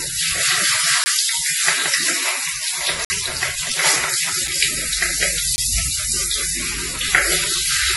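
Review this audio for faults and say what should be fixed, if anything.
Nothing above 11.5 kHz survives, and two kinds of smeary, swirly artefacts sit on top of each other. That's likely transcoding between lossy codecs, ending in WMA. Encode once from the original source instead.

There are blocks of digital silence at 1.04–1.06 s, 3.05–3.10 s, 4.48 s and 5.56–5.58 s. The audio drops to silence and back with no fade. Give the output buffer more headroom so it's always filled in time.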